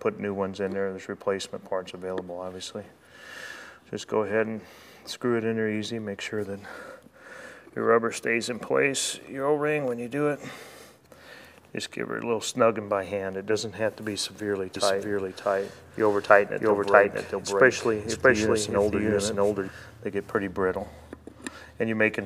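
From 14.76 s to 19.68 s a doubled audio track appears: a second, full-band copy of the audio runs roughly 0.7 s behind at about the same level, with no decay or room colour, starting and stopping abruptly. The likely cause is a slower second capture path.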